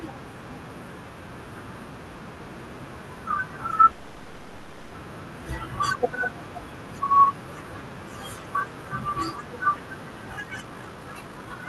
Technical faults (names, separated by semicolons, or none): call audio freeze; jitter buffer speed-up